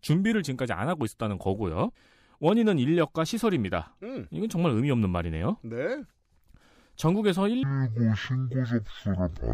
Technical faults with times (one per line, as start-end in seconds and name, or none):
7.63-9.53 stereo read as mono